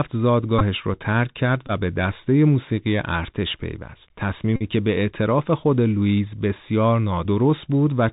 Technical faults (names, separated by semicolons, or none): Bluetooth CVSD headset codec; Bluetooth headset packet repeated